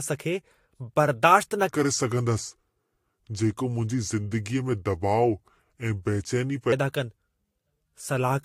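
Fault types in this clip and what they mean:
Transcoding between lossy codecs: the speech was likely encoded with Vorbis and then re-encoded as AAC-LC, so both codecs' artefacts are audible together, with nothing above 16.7 kHz.
Section at the wrong speed: from 1.69 to 6.72 s playback likely followed the wrong clock, running at 0.797 times normal speed, so the speech drags and drops about four semitones.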